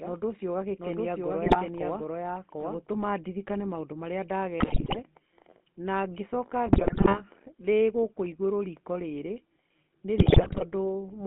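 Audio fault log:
throughout: GSM full-rate codec. The speech has that familiar buzzy, gravelly edge, plainly audible across the whole clip. The old GSM coder rebuilds the voice from a vocal-tract model fed by a thinned-out pulse train, so the fine texture of the excitation is gone and you hear it as grit. On top of that the band sits at roughly 200 Hz to 3.6 kHz, so there's no low body and nothing bright up top, consistent with a 13 kbps phone path.
0.0 to 2.78 s: doubled audio track. Right from the start there's a second copy of the speech running about 0.7 s behind the first, at much the same level, with no reverb tail or room colour on it. It just cuts out abruptly before "ndirikane maũndũ marĩa". That clean, full-band, fixed-delay repeat is most likely the same signal picked up twice, once through a slower path, rather than any acoustic echo.
1.45 to 1.57 s, 4.60 to 4.98 s, 6.66 to 7.23 s, 10.18 to 10.65 s: GSM bit errors. 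Four bursts where the voice breaks into squawks, pops and gargling. The first is short and mild. The second comes right after "ndirikane maũndũ marĩa", the third just before "ndĩgũkũ igũrũ riko rĩrĩ", and the last is near the end. These three are the heavier ones, each lasting around 0.4 to 0.6 s. Corrupted filter, pitch and gain values reached the decoder, so for those stretches the spectrum warps and the level lurches frame by frame, which fits a weak radio link.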